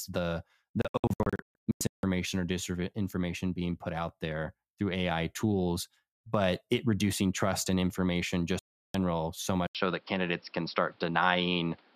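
Digital broadcast dropout breaks up this speech recording twice. From 0.82 to 2.04 s the receiver mutes in scattered short holes, the longest 160 ms and together about 0.83 s, before "or disinformation being put". After "reducing trust in information" a single gap runs from 8.59 to 8.95 s. Each time, failed frames are silenced and that audio is lost. At 9.67 s an 80 ms silence is followed by sound with nothing above 5.5 kHz and a new noise floor about 35 dB below the signal, at roughly the same level, through to the end. The input was likely switched to a poorer device, such as a headset in call mode.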